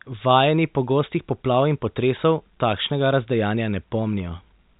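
The speech comes through with no technical faults, carried on a telephone-band G.711 channel whose faint level-following quantisation noise and lack of content above about 4 kHz are simply what that channel sounds like.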